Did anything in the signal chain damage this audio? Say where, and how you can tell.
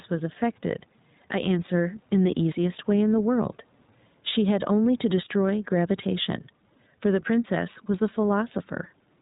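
Yes. Gain pumping runs through the whole clip. The room noise sits about 43 dB under the speech, and the gain swings by roughly 5 dB. Loud and quiet passages come out squashed together. This is likely a call-processing or input stage with the gain set too high, feeding a fast limiter or compressor that clamps down on each loud sound.

The iLBC codec also affects the entire clip. Nothing is present above 4 kHz, so the speech sounds narrowband, and it has a clearly audible rough, slightly synthetic texture. That texture fits a frame-based coder working in 20 ms blocks and is consistent with iLBC's 15.2 kbps mode. Each frame's excitation is coded on its own; the speech stays intelligible, but the roughness and the smeared background noise remain.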